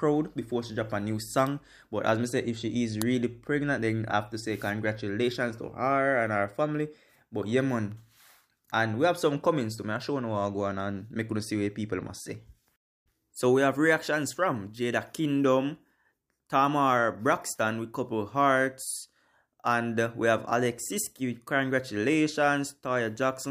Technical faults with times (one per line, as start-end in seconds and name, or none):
3.02 uninitialised buffer